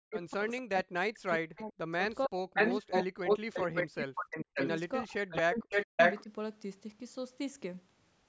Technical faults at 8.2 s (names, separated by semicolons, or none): none